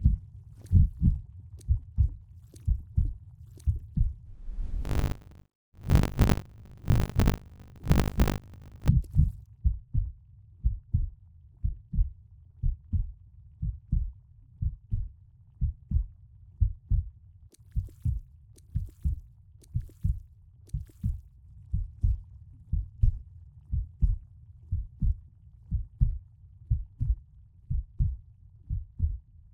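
Buffer tearing runs from 4.84 to 8.89 s: the writing and reading sides of the playback buffer have slipped, so roughly a third of each 20 ms period replays audio from about 70 ms earlier, joined hard on both sides, producing a robotic 50 Hz buzz.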